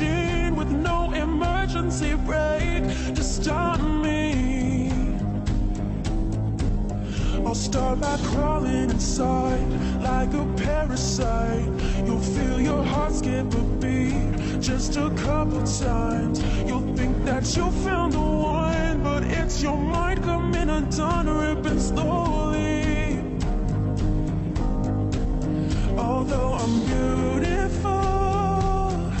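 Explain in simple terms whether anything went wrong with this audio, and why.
Between 18.51 and 19.92 s the audio suddenly slows by about 5.8 percent and drops in pitch by roughly a semitone, then snaps back to normal. This is a drift correction step. The likely cause is software that keeps two devices' clocks in line adjusting the playback rate in a single jump to rebalance its buffer, which shifts speed and pitch together for that stretch of about 1.4 s.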